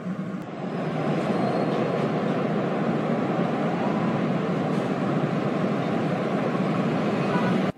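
Brief glitches break through the sound at 0.42 s and again at 4.14 s, each lasting about 50 ms. Both come from damaged data in a compressed stream: corrupted bytes make the decoder misread those frames and lose sync until it finds the next valid frame header.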